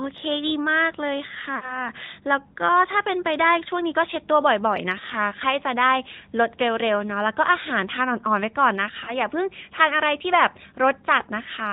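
A speech recording carried over an AMR narrowband mobile codec. Nothing above 4 kHz survives, so the sound is dull and boxy. The voice has a buzzy, synthetic edge from the codec rebuilding it from a vocal-tract model and a few pulses per frame. The damage is plainly audible. That level of roughness points to a mid-rate mode, roughly 10 kbps. There are also lost AMR speech frames. From 1.56 to 1.81 s, about 60 ms of speech goes missing, which fits three consecutive 20 ms frames. The decoder stretches the last good pitch and vocal-tract settings with falling gain, so the sound drags and fades before recovering weakly. From 9.04 to 9.16 s, a shorter gap of about 20 ms, consistent with a single frame, causes a brief dip or warble.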